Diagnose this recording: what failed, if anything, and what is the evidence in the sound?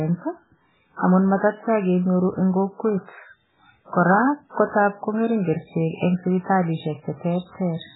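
The codec stage is the likely failure: heavy MP3 compression throughout the speech, starved of bits so badly that it points to a bitrate near 8 kbps. The encoder discarded everything above 3.8 kHz and zeroed weak frequency lines frame by frame, leaving dull, watery, swirling sound with smeared consonants.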